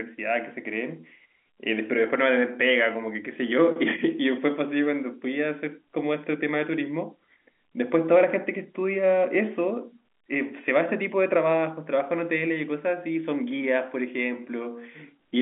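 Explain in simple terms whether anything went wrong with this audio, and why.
Nothing stood out on listening: this is ordinary telephone-quality speech, with the usual narrow phone-line sound and no faults heard anywhere in it.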